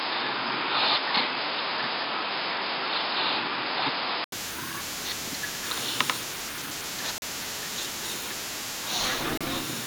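A speech clip. From the start to 4.32 s the sound is dull and boxy, with nothing above 5.1 kHz. An 80 ms silence marks the change, and the level shifts by around 5 dB. A different noise floor sits well below the speech. This is likely an input switched to a poorer device. Two brief dropouts follow, at 7.18 s for 40 ms and at 9.38 s for 31 ms. The sound cuts to silence, then resumes. These are likely Bluetooth stalls, with the headphone buffer running dry while packets were delayed.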